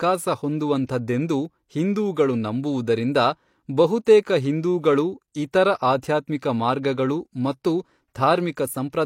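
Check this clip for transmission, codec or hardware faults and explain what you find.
The speech shows codec pre-echo three times: 0.86 to 0.89 s, at 4.05 s before "ಹಿಂದೂಗಳು ಇತರ", and at 6.01 s before "ಮಾರ್ಗಗಳು ಮತ್ತು". Block-wide quantisation noise leaks ahead of each sharp onset as a brief hiss. A spectrogram shows broadband haze preceding the attack, and the waveform shows low fuzz before the rise.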